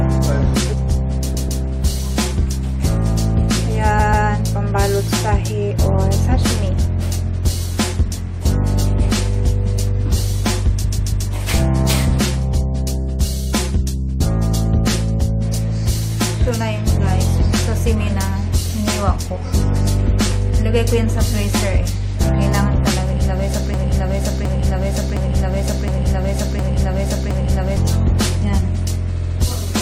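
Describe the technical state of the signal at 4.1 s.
At 4.1 s you're in the middle of a repeated-frames stutter, running from about 3.98 to 4.26 s. A 139 ms block of compressed frames got played two extra times, so the same bit of sound loops back, adding about 279 ms to the audio.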